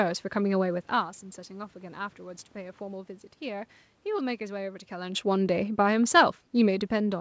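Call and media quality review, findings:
No system fault found: the speech is band-limited at 8 kHz, consistent with a G.722 wideband call path, with room noise and level shifts around 1 s and 5 s that fit the talker moving relative to the microphone.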